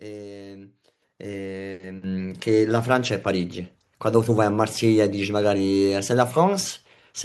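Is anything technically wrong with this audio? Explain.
Yes. The microphone volume is stepped up twice, at 1.02 s by about 8 dB and at 2.04 s by about 6 dB. The call software judged the input too quiet and raised the device level in single jumps. Speech and background get abruptly louder together each time.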